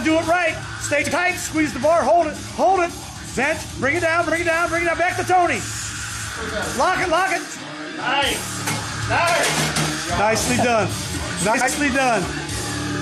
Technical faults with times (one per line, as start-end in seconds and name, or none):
1.02-1.12 frames out of order
4.27-4.33 frames out of order
11.54-11.69 frames out of order